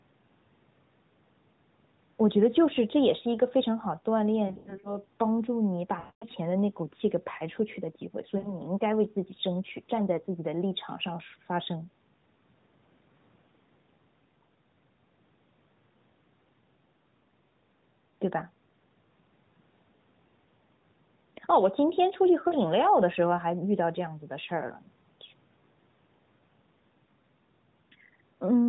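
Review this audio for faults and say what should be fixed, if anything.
Lost AMR speech frames occur at 4.48–4.97 s (scattered gaps, longest 80 ms), 5.99–6.27 s, 8.38–8.56 s and 22.48–22.57 s. The decoder repeats the last pitch with falling gain, which smears and fades the sound. This shows as flattened, blurred harmonics and a tapering waveform envelope. Better radio coverage or stronger error protection on the link would prevent it.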